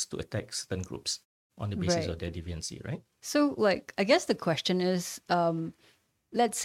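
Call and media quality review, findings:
No faults found in this speech clip. The muted pauses behave as designed, with the background dropping to silence between phrases and returning in time for each onset.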